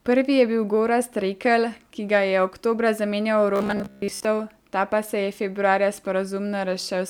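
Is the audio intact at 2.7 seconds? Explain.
Yes, at 2.7 seconds the speech runs through cleanly with no audible dropout, click, distortion or other technical fault.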